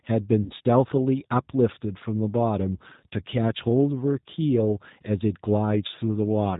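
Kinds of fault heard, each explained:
G.729 codec: low-bitrate VoIP coding at 8 kbit/s rebuilds the speech from a synthetic model, so it sounds dull, capped at 4 kHz, and plainly rough.
VoIP packet loss concealed by the speech codec: around 0.44 to 0.54 s, about 60 ms went missing, and the decoder stretched the last sound out as it faded before recovering.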